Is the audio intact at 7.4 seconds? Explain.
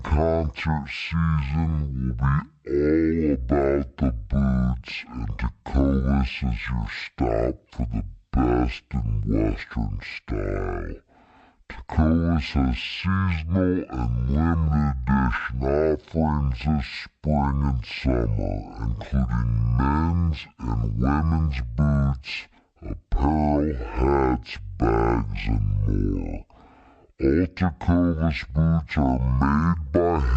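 No. At 7.4 seconds, as throughout, the speech drags at half speed and sits an octave low, with a faint mirrored image in the upper spectrum. This is stereo read as mono: interleaved left and right samples are played in sequence as one channel.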